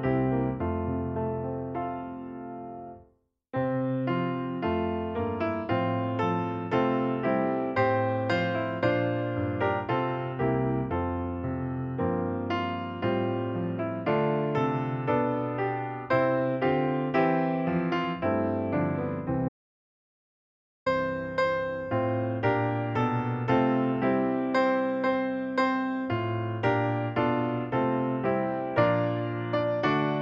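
At 19.49 s the sound stops abruptly in mid-flow and does not return until 20.86 s, an audio dropout to silence lasting about 1.38 s. The gap is silent, with no room tone or noise floor at all, and whatever occurred during it is missing. The likely cause is a momentary loss of the input signal while the recorder kept writing zeros. On a waveform this shows as a flat line, and on a spectrogram as a solid black vertical band with hard edges.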